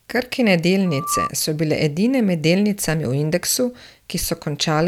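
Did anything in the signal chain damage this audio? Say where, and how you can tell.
Yes. From 0.86 to 1.31 s a single 1.2 kHz tone rises out of the speech, swelling over roughly a third of a second until it is about as loud as the talker, then stops just before "so bile edine med". That is loudspeaker feedback squeal at the analogue front end: the microphone was picking up a loudspeaker it was feeding, and around 1.2 kHz the loop gain passed one, so that frequency kept reinforcing itself until the loop was broken.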